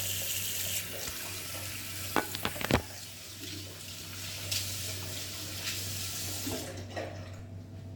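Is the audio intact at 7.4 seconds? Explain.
No. A DC step at 7.39 s shifts the waveform's zero line abruptly, giving a low thump; the offset then decays as a 20 Hz high-pass drains it.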